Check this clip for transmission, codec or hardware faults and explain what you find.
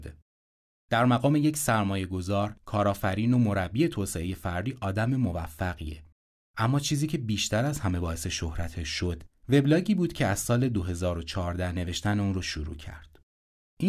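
Nothing turned up here: listening through the speech, there's no sign of any transmission, codec or hardware trouble to point to.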